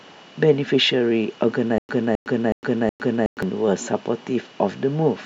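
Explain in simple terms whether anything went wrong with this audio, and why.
Yes. From 1.78 to 3.43 seconds the speech has a stutter with silent gaps. A 0.26-second snippet repeats four times, each followed by 0.11 seconds of silence. The playback likely stalled and kept retrying. The speech meant for that stretch is lost.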